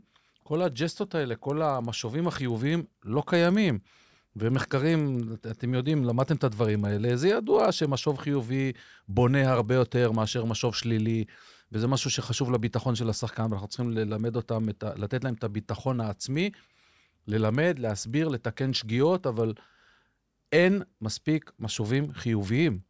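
From start to finish the speech carries a faint buzz at 20 Hz, one tick every 50 ms, from a resampler restarted on every block during the 48 kHz to 16 kHz conversion. Each 50 ms block was filtered in isolation, so its edges lacked true neighbouring samples and picked up a small error. Unlike mains hum, the buzz vanishes in pauses, and unlike dropouts, no audio is missing.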